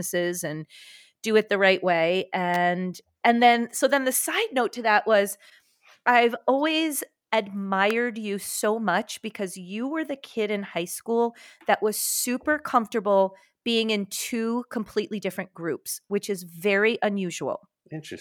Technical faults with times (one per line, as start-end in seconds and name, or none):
2.54-2.56 electrical switching spike
7.90 electrical switching spike